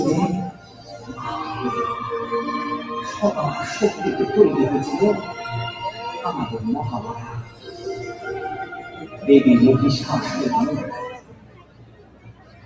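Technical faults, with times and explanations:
Throughout, noise suppressor applied to music or sounds: a speech-tuned suppressor was left running, so it keeps treating the steady parts as noise. Level swings by roughly 15 dB, sustained material and tails sink, and attacks punch through, which makes it pump and thin out. The call path's band limit at 8 kHz is normal and separate from all this.
0.51–1.15 s, 7.07–7.86 s, 8.82–9.24 s and 11.12 s to the end, sound cut by the noise suppressor: in these stretches the suppressor decided the sound was noise and pulled it down by about 10, 11, 8 and 11 dB. Held and fading parts dip or get their decay clipped, and the last one runs for about a second and a half.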